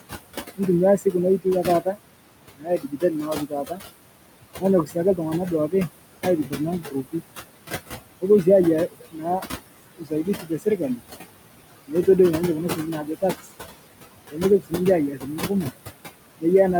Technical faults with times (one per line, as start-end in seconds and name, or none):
0.00-16.79 noise suppressor artifacts
0.56-1.97 speech cut by the noise suppressor
2.57-3.80 speech cut by the noise suppressor
4.60-7.21 speech cut by the noise suppressor
8.21-11.03 speech cut by the noise suppressor
11.87-12.08 speech cut by the noise suppressor
12.70-13.46 speech cut by the noise suppressor
14.30-15.72 speech cut by the noise suppressor